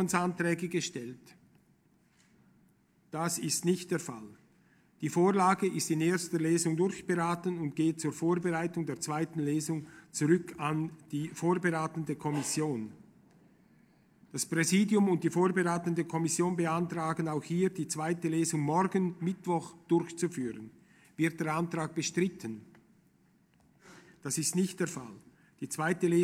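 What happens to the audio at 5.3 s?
Nothing goes wrong at 5.3 s; the audio plays through that moment intact, with no dropout, click or distortion.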